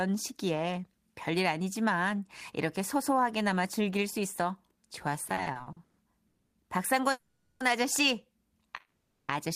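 A speech recording with repeated stalls (stutter) from 5.29 to 5.99 s: seven short breaks, the longest 130 ms and about 300 ms in all, where the last sound is stretched because packets arrived too slowly for playback. Nothing is lost, but the speech drags. Unlike a single freeze, it is a choppy series of brief holds. Three call audio freezes follow, each a single hold: at 6.27 to 6.55 s (260 ms, about 150 ms of it silent), at 7.11 to 7.62 s (490 ms, about 90 ms silent) and at 8.77 to 9.31 s (520 ms, about 360 ms silent). In each one the sound carries on as a buzz or hiss, fades to silence and then resumes where it stopped, likely because packets were held up and the jitter buffer ran dry.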